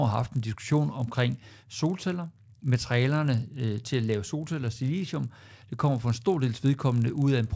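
Throughout the speech, a resampler restarted on every block leaves a 50 Hz buzz under the signal. It fits 20 ms blocks converted independently, likely from 48 kHz to 16 kHz, with each block edge missing its neighbouring samples and so ticking.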